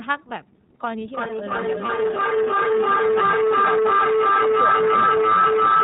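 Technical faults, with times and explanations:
Throughout: iLBC codec. The speech went through a narrowband VoIP codec at 13.33 kbps with 30 ms frames, each coded on its own. Nothing above 4 kHz survives, so the voice sounds muffled and boxy, with a plainly audible rough, synthetic edge.
1.05–5.8 s: feedback echo between two devices. A second device on the same call in the room replays what this microphone sent, and the microphone picks it up again where no echo canceller can reach it. Each phrase returns roughly every 0.3 s, thinner and more ringing each pass, with repeats peaking about 11 dB above the speech.
1.85 s: lost iLBC frame. One 30 ms frame went missing, and the decoder filled the gap by repeating the last pitch cycle mixed with noise. It comes through as a brief held, buzzy vowel, and because frames stand alone the voice recovers immediately afterwards.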